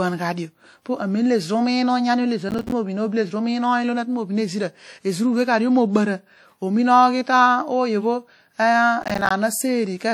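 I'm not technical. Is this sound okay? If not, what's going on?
No. The speech has a washy, ringing quality with a hiss that swells and fades along with the talking, which is likely WMA compression: the file was squeezed hard, and the encoder smeared its errors across short stretches of sound and dropped faint detail.

There is also processor overload crackle, from 2.49 to 2.72 s and again from 9.02 to 9.31 s. The computer fell behind with its audio work, dropping a run of tiny chunks, each roughly 5 ms long, as silence, which comes across as a brief gritty tearing.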